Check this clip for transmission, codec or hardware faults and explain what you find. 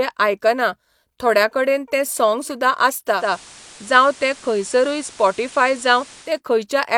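One fault is present: digital radio blending to analogue from 3.10 to 6.40 s, where a 0.22 s cross-fade hands over to FM and back, adding hiss about 25 dB below the signal with no change in level. A spectrogram shows a faint noise floor filling the gaps between syllables.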